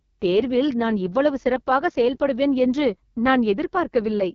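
Throughout the speech, an AMR wideband (HD Voice) codec is running at a very low rate, which fits its lowest 6.6 kbit/s mode. The pulse-driven vocal tract model is starved of bits, so the voice turns rough and raspy, and nothing is heard above 7 kHz.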